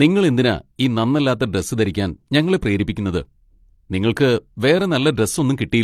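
A short speech clip where the whole thing carries stacked coding artefacts: nothing comes through above 15 kHz, and you get the mixed artefacts of one lossy codec layered over another's. That's transcoding between lossy codecs. It likely went through an AAC-LC pass and then HE-AAC, which fits roughly 64 kbit/s followed by 40 kbit/s. The second encoder wastes bits re-coding the first one's damage, and the lowest cut-off in the chain sticks.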